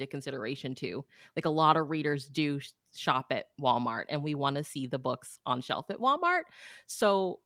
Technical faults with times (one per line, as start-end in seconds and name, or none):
none